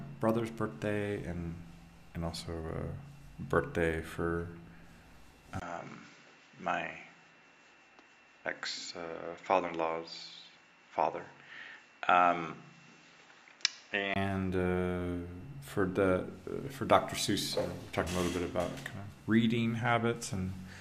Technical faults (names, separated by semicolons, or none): input switched to a poorer device